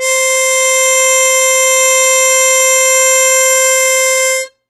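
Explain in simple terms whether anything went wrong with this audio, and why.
The music sounds dull and smeared from start to finish, with a watery, warbling shimmer on held sounds and nothing at all above about 15.3 kHz. That points to AAC compression, likely a low-quality AAC-LC encode: to save space, the encoder throws away the highest frequencies and coarsely approximates the rest of the sound, leaving gaps and fizzy patches where detail used to be.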